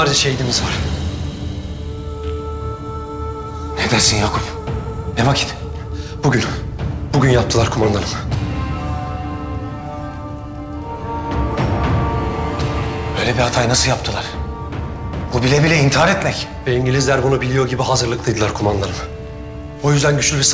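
Nothing here goes wrong at any point; the sound simply carries the ordinary character of a call line, with nothing above about 8 kHz, which fits a G.722 call codec running at 64 kbps.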